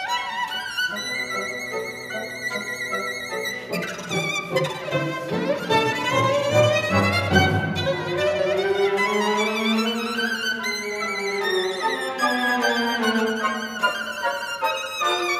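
No technical faults can be heard anywhere in the audio. There are no events to mark along its timeline.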